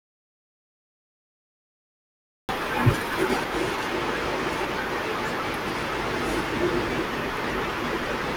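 The input feed was most likely lost at the start, perhaps through a disconnected device, a failed link or a mute left on, while the recorder kept writing silence. This speech clip therefore opens in an audio dropout to silence that is already under way from 0.00 s and lasts until 2.49 s. The gap is silent with no room tone at all, and the speech enters abruptly mid-flow, so whatever preceded it is missing.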